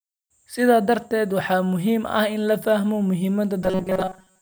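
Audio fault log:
3.62–4.42 s, robotic sound from repeated short buffers: the speech becomes a rigid metallic 188 Hz buzz, likely from a slice of about 5 ms being looped while new audio arrived too seldom. The spectrogram shows fixed, evenly spaced harmonic lines, and the waveform shows a cycle that roughly repeats, about 70% of the time.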